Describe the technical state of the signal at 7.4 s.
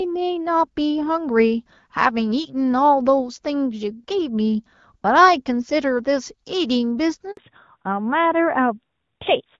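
At 7.4 s the call has just been moved from one network link to another. During that handover gap, from 7.31 to 7.37 s, no audio frames arrived. The sound dies away within a few tens of milliseconds and leaves a 60 ms hole. Whatever fell in that window is gone, not muted.

When the new link picks up at 7.37 s, it runs in a fallback to narrowband. The call has left the wideband HD Voice codec, whose clear, full-bodied band up to about 7 kHz fits its 12.65 kbit/s mode. It has switched to an older narrowband AMR codec, and its sound points to a rate around 12.2 kbit/s. At 7.4 s and through to the end, nothing is left above 4 kHz. The sound turns dull, boxy and rougher, and the airy top of sibilants is missing.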